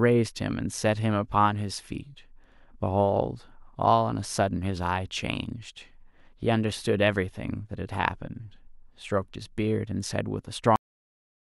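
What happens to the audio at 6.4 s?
Nothing goes wrong at 6.4 s; the speech runs through that moment intact, with no dropout, click or distortion.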